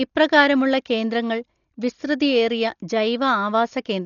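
Throughout the speech, nothing is present above 6.9 kHz, and the remaining band sounds dull, with a rough, fluttering noise around tonal parts. This is likely Dolby Digital compression at a rate fitting about 40 kbps, where starved frequency lines are refilled with decoder dither noise.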